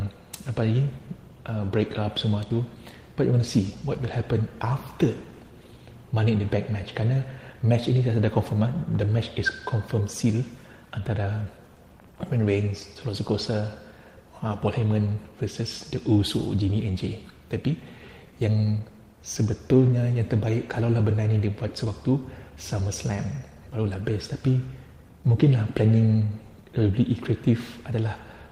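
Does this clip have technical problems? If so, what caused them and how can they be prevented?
Yes. There's clock drift between sender and receiver running the whole clip: the sender's clock is about 5 percent fast, so the receiver's jitter buffer keeps overfilling. Fix it with drift compensation, meaning adaptive resampling locked to the sender's rate.

That drift drives repeated timing corrections from 0.1 to 28.5 s, with the receiver trimming short bits to keep pace, heard as a 105 percent rate with uneven little hiccups. Smooth resampling instead of cutting prevents it.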